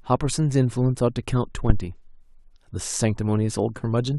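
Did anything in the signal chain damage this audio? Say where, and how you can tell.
Yes. At 1.70 s there's a phantom power thump, a deep low thud that dies away by about 1.85 s, with a fast decay of roughly 34 ms. It's an analogue-stage fault: the mic supply was switched while the input was live, and that voltage step pushed straight through the coupling capacitors as one big low-frequency pulse. It hits about -4 dBFS.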